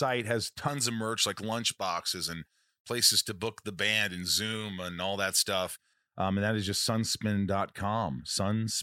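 From 0.68 to 5.93 s, pre-emphasis left on: an uncorrected J.17 treble lift, about 11 dB at 10 kHz, makes speech thin and sibilant.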